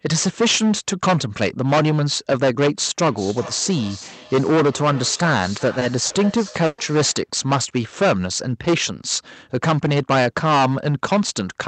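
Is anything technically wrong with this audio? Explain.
Yes. This speech clip has several faults in a call path that, judging by the spectrum ending near 8 kHz, went through an Opus codec at a moderate bitrate.

Hard clipping runs through the whole clip. The level is overdriven by about 16 dB, so a sizeable share of samples, very roughly one in seven, hit the ceiling and are sliced flat. The result is harsh fuzz on every loud syllable. On a waveform the peaks form flat plateaus. On a spectrogram there is bright harmonic smear up to the band limit.

A feedback echo between two devices runs from 3.04 to 7.29 s. A second device in the same room replays the call into a microphone, and that microphone's canceller can't remove it. Each phrase returns roughly every 0.4 s, thin and ringing, peaking about 17 dB below the speech. A spectrogram shows faint, evenly spaced copies of each syllable.

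A short stall from a late packet occurs between 5.79 and 5.92 s. The jitter buffer ran dry, and about 20 ms of sound was stretched before playback resumed where it left off. A syllable sounds briefly held with a slight buzz. A spectrogram shows a frozen, smeared column.

Lost packets rebuilt from error correction occur at 5.81 to 5.85 s and again at 6.10 to 6.14 s, 40 ms each. The decoder played the lower-quality redundant copy carried in the next packet. These patches sound grainier and noisier.

Short concealed packet loss comes at 6.06 to 6.13 s, where 40 ms of audio is gone. The receiver extrapolated from the preceding sound and then blended back. It is heard as a brief wobble or smear. A spectrogram shows harmonics that are repeated or blurred rather than evolving.

A burst of packet loss hits 6.66 to 6.81 s. About 120 ms is missing, filled by a fading continuation that ends in roughly 30 ms of silence. 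The result is a held sound dying away, then a jump forward. The waveform shows a decaying envelope dropping to a flat gap.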